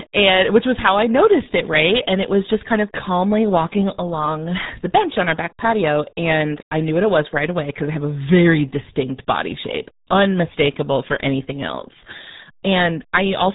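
From start to finish the speech sounds muffled and gargly, with a wet, bubbling texture on every syllable and no air or crispness, because nothing above about 3.8 kHz survives. This is the RealAudio 14.4 codec, the first RealAudio speech format, built for dial-up modems. Its heavy damage and sharp top-end cut point to a stream of roughly 8 kbit/s, far too little data to carry detailed speech.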